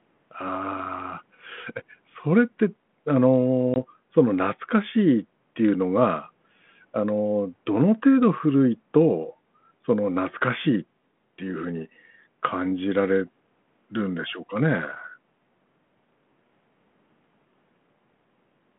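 At 3.74 to 3.76 s a hard-edged gap of about one packet's worth of silence cuts the speech, then the speech returns slightly distorted as the 32 kbit/s G.726 decoder's predictor loses sync: packet loss on an ADPCM call.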